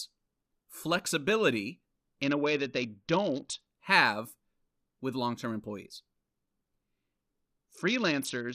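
From 2.22 to 3.66 s and from 7.71 s to the end, a Bluetooth SBC bit pool drop starves the upper sub-bands. The treble dulls and gritty noise rises, while the spectrogram's top band goes dark.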